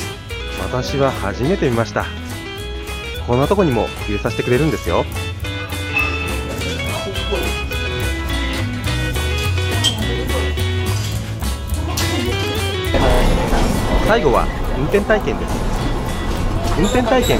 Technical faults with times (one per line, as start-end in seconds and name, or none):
0.63-16.51 clock drift buffer slips